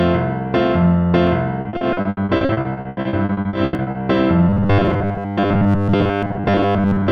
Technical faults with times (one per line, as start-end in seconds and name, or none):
1.27 audio missing between chunks
1.61-3.98 repeated packet loss (robotic sound)
3.75 audio missing between chunks
4.49-7.12 robotic sound from repeated short buffers
6.23 audio missing between chunks